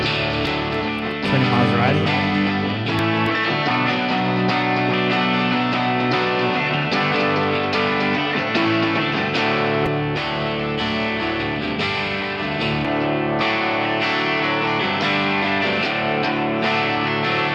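A doubled audio track runs from the very start of the clip to 9.22 s: a second, full-band copy of the audio trails the original by around a third of a second, sitting roughly 10 dB lower, with no decay or room colouring of its own, and it drops out abruptly at 9.22 s. The likely cause is the same signal reaching the mix twice, once through a slower capture path or an edit leaving two offset copies.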